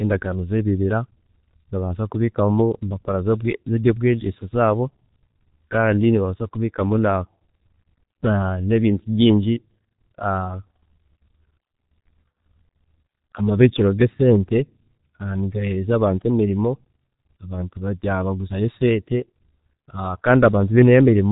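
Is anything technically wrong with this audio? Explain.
Yes. Throughout the speech, the G.723.1 codec has left heavy damage. Its coarse 30 ms frames and slowly updated voice model make the speech muffled and hoarse with smeared consonants, consistent with a roughly 6.3 kbit/s rate. A spectrogram shows an empty band above 3.8 kHz and blurred, smeared onsets.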